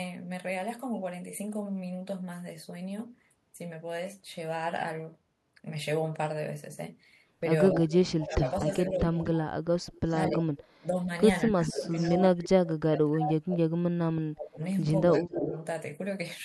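Speech suppressed in double talk, 7.7 to 9.52 s: the voice sinks by about 20 dB and thins in patches totalling about a second. The likely cause is the echo canceller hearing both sides at once and pulling its own talker down with the echo.

Echo leak, 7.91 to 9.29 s: a delayed copy of the voice trails 239 ms behind at about 10 dB below the speech. This is likely loudspeaker pickup that the canceller failed to remove and sent back.

Echo leak, 9.92 to 10.65 s: the copy returns at 243 ms, again about 10 dB down. Its likely source is the same uncancelled loudspeaker sound.

Speech suppressed in double talk, 10.27 to 13.63 s: dropouts reaching about 30 dB cut the voice into pieces over roughly two seconds. This is likely the same double-talk clamping.

Echo leak, 11.7 to 12.06 s: a fainter scrap, about 15 dB down, arrives 247 ms late. It is likely residual pickup slipping past the canceller.

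Speech suppressed in double talk, 14.21 to 15.47 s: the voice drops by about 30 dB for around a second. The likely cause is simultaneous talk defeating the canceller.

Echo leak, 15.26 to 15.65 s: a 255 ms delayed copy at about 10 dB below the speech follows. This is likely leftover loudspeaker echo.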